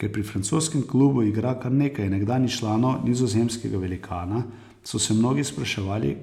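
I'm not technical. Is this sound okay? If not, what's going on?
No. At 4.86 s, between "nizozemskega velikana" and "so se", the speech jumps ahead, likely a dropped buffer (overrun) losing a few thousandths of a second.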